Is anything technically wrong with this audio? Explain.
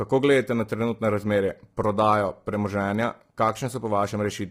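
Yes. Throughout the speech there is heavy low-delay AAC compression, likely AAC-ELD at a bitrate in the region of 24 kbps. Its short frames resolve pitch harmonics poorly, so the voice sounds rough and grainy. On a spectrogram, noise fills the gaps between harmonic lines, and the top band looks thinned or smeared.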